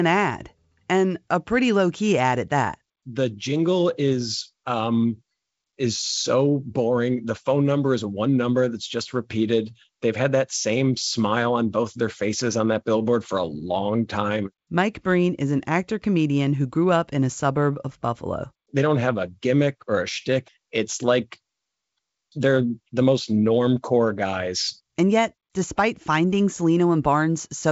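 No technical faults can be heard: the speech carries the character of G.722 wideband telephone coding, with content reaching up to about 7.7 kHz and the faint upper-band graininess of that codec, which fits it running at 56 kbit/s.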